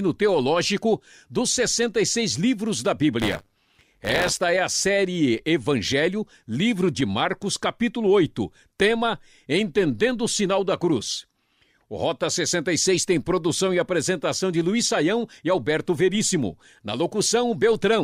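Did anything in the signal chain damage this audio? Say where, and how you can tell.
Yes: a robotic 100 Hz rattle after "livros da", 3.21 to 4.37 s, is buffer tearing in the driver buffer, each period splicing in audio one lap old.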